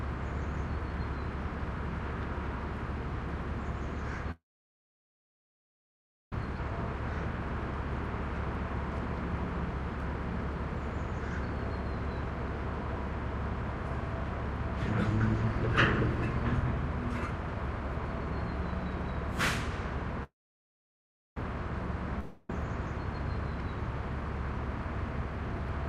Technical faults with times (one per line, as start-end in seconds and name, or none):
4.31-6.33 call audio freeze
6.56 skip ahead
20.23-21.37 call audio freeze
22.19-22.50 long network dropout